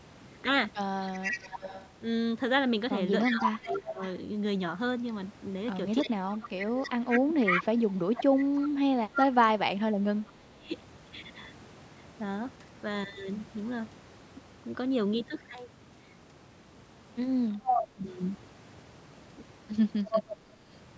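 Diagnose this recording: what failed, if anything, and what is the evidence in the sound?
Echo leak, in the call processing. A delayed copy of the far talker returns about 322 ms late, at 1.03–3.79 s, 5.99–9.27 s, 17.65–17.82 s and 20.1–20.37 s. It is first a little below the speech, later about as loud. The loudspeaker side's echo canceller likely left residual echo unremoved.

Speech suppressed in double talk, also in the call processing. The speech dips sharply at 3.29–4.01 s, 6.04–10.7 s and 17.57–18.04 s, by roughly 20 to 30 dB. Each dip overlaps returning echo. The canceller likely could not separate talker from echo and attenuated both.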